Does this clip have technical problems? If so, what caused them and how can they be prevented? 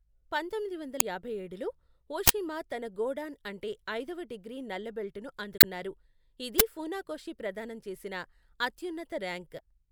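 Yes: damaged data in a compressed stream at 0.97–1.02 s, 5.57–5.64 s (after "డిగ్రీ నల్ల బెల్ట్ ను") and 9.56–9.60 s. Corrupt bytes make the decoder misread frames, giving brief chirps, squawks, clicks or short holes that show as broadband smears or waveform discontinuities. Verify file checksums and transfer integrity to prevent this.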